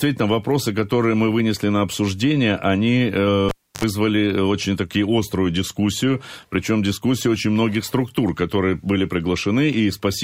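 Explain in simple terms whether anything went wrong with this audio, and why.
A cable pulled and plugged in, from 3.49 to 3.84 s: a pop as the cable comes out, about 0.31 s of near silence, then a short 50 Hz mains buzz lasting about 0.07 s while the plug is half in, and another pop as the sound returns.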